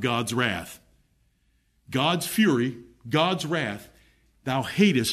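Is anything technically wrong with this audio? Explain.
No, nothing in this speech recording stood out as a technical problem on listening.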